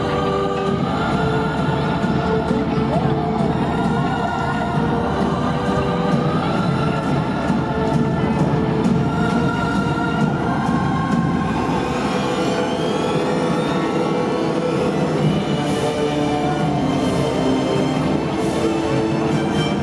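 No technical faults can be heard anywhere in the audio.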